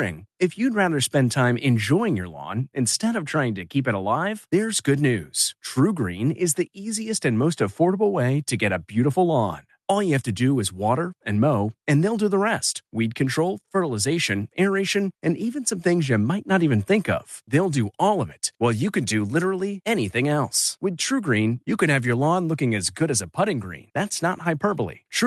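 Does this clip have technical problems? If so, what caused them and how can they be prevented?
No, nothing in this speech recording stood out as a technical problem on listening, and it carries only the ordinary character of a call connection.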